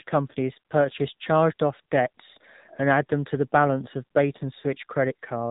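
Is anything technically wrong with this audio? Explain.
Yes. Two faults are audible.

Throughout, the speech carries AMR narrowband mobile codec damage, at 7.4 kbps. Nothing above 4 kHz survives. At this low rate the vocal-tract model gets few pulses per subframe. The voice sounds plainly buzzy, muffled and synthetic.

At about 4.60 to 4.64 s, just after "to the balance of", there are lost AMR speech frames. The decoder reuses the last good pitch and vocal-tract settings at reduced gain. This points to a single lost 20 ms frame. It is heard as a brief dip or warble.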